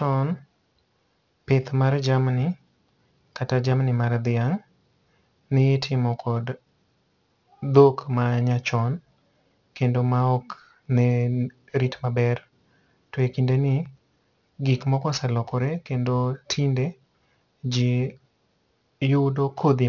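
Speech with aliasing throughout. The spectrum runs right up to a hard edge at 6 kHz, which fits a rate drop from 44.1 kHz to 12 kHz without a proper anti-alias filter. Sibilants fold back as gritty, metallic tones about 25 dB below the voice, unlike simple band-limiting, which would only sound dull.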